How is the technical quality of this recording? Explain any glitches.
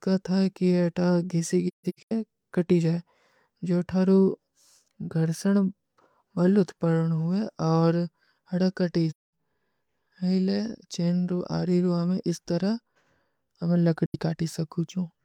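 The recording is marred by three short silences from AAC frame loss with muting: at 1.67–2.12 s (about 0.34 s missing in patches, the longest around 0.15 s), at 9.10–9.33 s, and at 14.06–14.16 s. Lost frames were decoded as silence, and the overlapping transform windows fade the sound out and back in. Unlike a hard dropout, these holes have soft edges.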